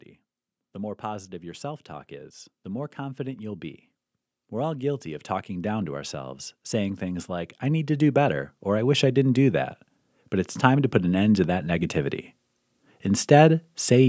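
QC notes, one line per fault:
0.72–3.9 s and 4.5–9.74 s, automatic gain rising: the gain control judged the input too quiet and ramped its gain up, by about 5 dB and then about 11 dB, so the speech and the background noise swell together.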